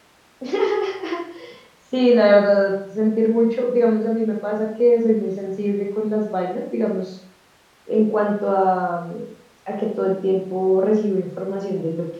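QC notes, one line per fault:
No faults found.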